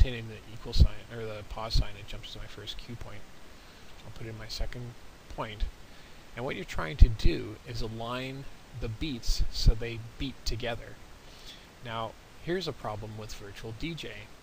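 At 7.23 s, a block of digital silence appears: a run of output samples was replaced with zeros, lasting about 1.45 ms, which fits a 64-sample block. Because the signal drops to silence and returns with no fade, each edge is an abrupt step in the waveform, and the two steps sit so close together that they merge. The hole itself is too brief to hear as a gap, so the result is a single sharp tick in the sound.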